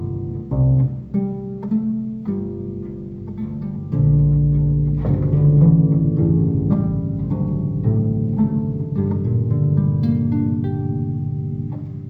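Stereo read as mono runs from start to finish: interleaved left and right samples are taken one after another as a single channel, so each frame counts twice. Playback runs at 0.5x speed and 12 semitones low, with a faint mirrored image in the upper spectrum.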